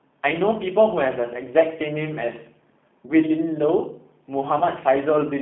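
Throughout, the G.729 codec rebuilds the speech at 8 kbit/s from a modelled filter and sparse pulses, confined to 200 Hz to 3.5 kHz and plainly rough and synthetic. At 3.07 s and again at 4.59 s, VoIP packet loss concealed by the speech codec: 20 ms of packets, which fits two 10 ms frames, went missing each time. The decoder stretched its last pitch into a brief fading buzzy tone or coloured noise, with weakened sound lingering until 3.13 s and 4.63 s.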